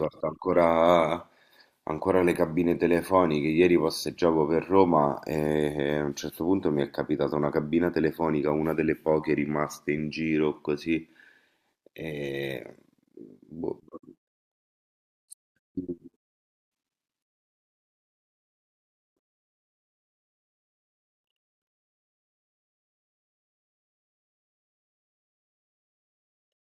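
Nothing in the recording stood out as a technical problem on listening.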